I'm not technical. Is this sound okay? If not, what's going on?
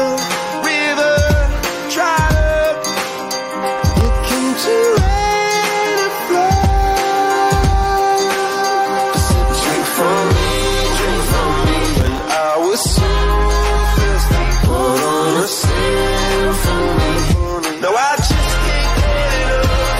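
No. There are two short bursts of processor overload crackle, from 3.77 to 4.05 s and from 12.01 to 12.26 s. The computer fell behind on tiny chunks of audio, each a few milliseconds long, and every missed chunk became a brief silent gap, heard together as gritty crackling.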